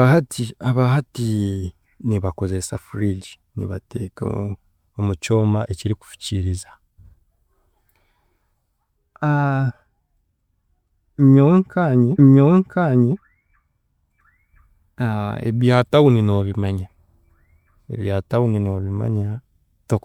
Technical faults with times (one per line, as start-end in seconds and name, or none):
12.17-13.17 stream segment repeated